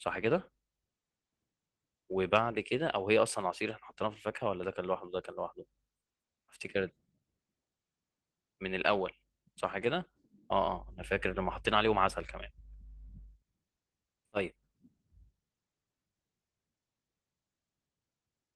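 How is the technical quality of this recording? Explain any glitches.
Nothing stood out on listening to this recording; no glitches are audible.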